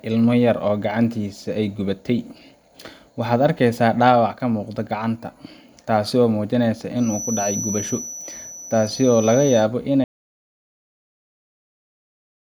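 From 6.94 s to 9.68 s a feedback whistle sits behind the speech: a thin, steady tone at 6 kHz, roughly 10 dB under the voice, swelling and fading slowly in level. Unlike runaway howl it never builds, pointing to a loudspeaker-to-microphone loop likely hovering just at the edge of feedback.

At 10.04 s the audio drops out to silence and stays silent to the end. The gap is silent with no room tone, which sets it apart from a gate or fade. It points to the input being cut off while recording carried on.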